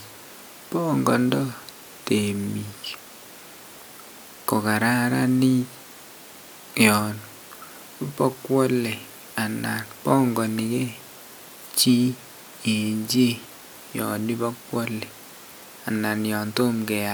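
A speech recording with no audible technical fault anywhere in the signal.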